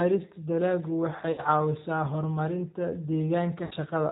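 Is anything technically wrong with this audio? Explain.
Yes. The speech has been through a G.729 codec for its whole length, with two bursts of VoIP packet loss concealed by the speech codec.

G.729 codec, throughout: The bandwidth stops at 4 kHz, and the voice has a plainly audible rough, slightly synthetic texture. That points to an 8 kbit/s G.729A-type coder, which discards the waveform and resynthesises each 10 ms frame from a vocal tract filter, a pitch predictor and a sparse four-pulse excitation per half-frame. Anything above 4 kHz is absent.

VoIP packet loss concealed by the speech codec, at 1.32–1.42 s and 3.65–3.74 s: Each event covers about 60 ms of lost audio, which fits two missing packets. The decoder fills each gap by extrapolating its last pitch period and filter at decreasing gain, so the sound smears into a buzzy tone or coloured noise that fades instead of a clean dropout. 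The first gap sits just before "caawisaa horumarinta". Because each frame is predicted from the previous one, the audio stays weak and distorted for a short while after packets resume.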